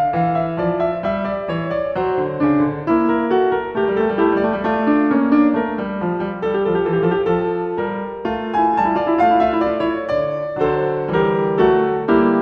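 No technical faults can be heard anywhere in this music.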